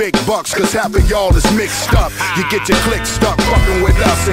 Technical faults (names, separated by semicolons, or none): mains hum